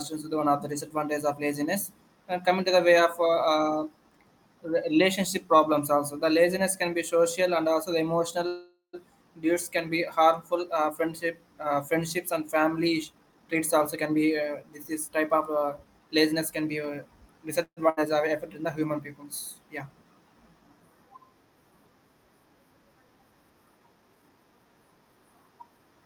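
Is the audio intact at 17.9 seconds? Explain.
No, not quite. Right around there, from about 17.89 to 18.00 s, there's a burst of packet loss. A run of packets never made it in time, so the receiver stretched the last bit of sound it had across roughly 75 ms, fading it down as it went. When the stream picks back up, about 80 ms of the original speech is simply gone, so you get a brief smeared tail and then a small jump forward.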